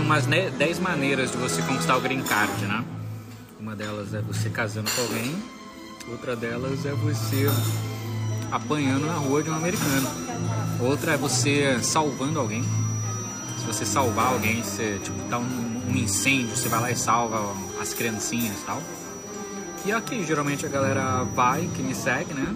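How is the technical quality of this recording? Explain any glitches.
The one real problem is a feedback whistle that arrives at 8.16 s and stays right to the end at 22.55 s. It's a thin, steady tone at 5.8 kHz, sitting roughly 15 dB under the main sound and slowly swelling and fading in level. That's most likely a speaker-to-mic loop hovering right at the edge of feedback, so a single high frequency keeps ringing without ever building into a full howl.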